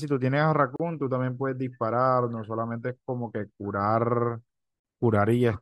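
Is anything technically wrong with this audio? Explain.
Yes, there are gaps at the joins of encoded pieces, at 0.76 to 0.80 s (37 ms) and 4.80 to 4.85 s (49 ms), four seconds apart. Untrimmed encoder delay and padding leave brief silences with smeared edges before the speech picks up where it stopped.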